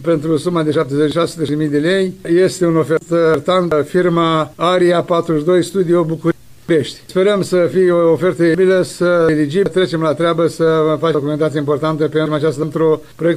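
Chunks out of order occur five times, at 0.74–1.49 s, 2.97–3.72 s, 6.32–7.06 s, 8.55–9.66 s and 11.15–12.63 s. In each, a block of about 0.37 s plays late, after material that should follow it: one block late in the first three, two in the fourth, three in the last. Nothing is missing, but the sequence jumps backward, giving a jumbled passage with three hard joins.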